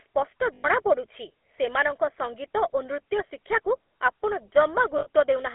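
From the start, the GSM full-rate codec colours the whole clip. The speech sounds buzzy and gravelly, confined to roughly 300 Hz to 3.4 kHz, which fits a 13 kbps phone codec.

From 0.54 to 0.82 s, lost GSM frames hit. The last good sound is held and repeated, ringing roughly and metallically. Again at 4.98 to 5.08 s, a shorter ring.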